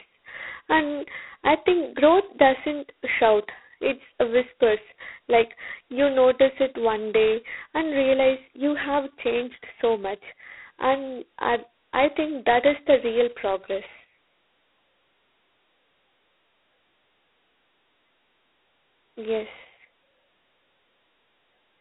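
Throughout, the speech carries G.726 ADPCM damage. A harsh, rasping hiss tracks its level, suggesting 16 kbit/s coding. Nothing passes above 3.9 kHz.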